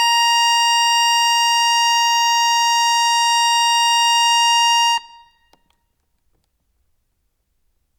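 The music has no faults.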